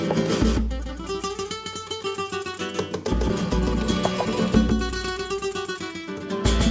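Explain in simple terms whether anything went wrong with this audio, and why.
Three things went wrong.

The first is a doubled audio track, heard all the way through. A second copy of the same sound plays about 150 milliseconds behind the first. It is roughly as loud as the original. It has no echo tail or room sound, so it is not a real echo. The likely cause is that the sound was picked up twice, once through a slower route, and both copies ended up mixed together.

The second is a skip ahead at 3.30 s. Playback jumps forward with no gap. Roughly 0.7 seconds of sound is simply missing, and the two sides are joined almost directly. This happens when a stretch of audio is thrown away, either on the way or because the receiving buffer overflowed while later audio was already waiting.

The third is a jitter buffer speed-up, from 4.72 s to 6.24 s. Here the sound runs about 7 percent faster, but the pitch stays the same. 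It can feel slightly hurried. The receiver had built up too much waiting audio. To catch up, it cut out many tiny slices, about a tenth of a second in total.

The call link itself carries nothing above 8 kHz, which fits the G.722 codec.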